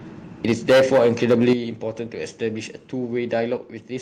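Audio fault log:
0.44–1.53 s, microphone overload: the loudest syllables come through with a harsh, crackly edge because their peaks run into the converter's ceiling and get flattened. It's driven about 13 dB too hot, likely from the input gain being set too high, with roughly a tenth of samples clipped.
0.52 s, 1.53 s and 3.57 s, microphone volume stepped down: the whole level, voice and room alike, drops abruptly at each point, by about 3 dB, then about 8 dB right as the distortion ends, then about 3 dB again. That's likely the call software reacting to the overload by cutting the input gain in single steps.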